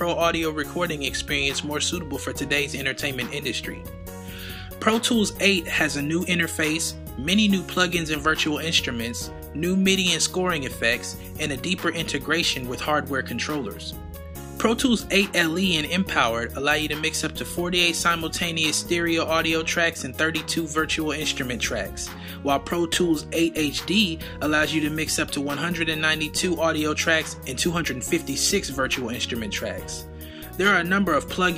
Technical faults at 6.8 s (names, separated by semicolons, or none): none